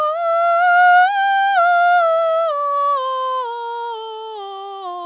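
Nothing goes wrong in this bit of music; it simply carries the narrow, phone-line character of a call, with nothing above 4 kHz, which fits a G.711 mu-law codec.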